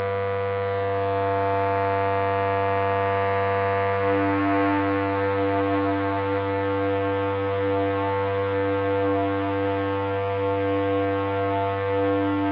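No technical faults can be heard anywhere in this audio.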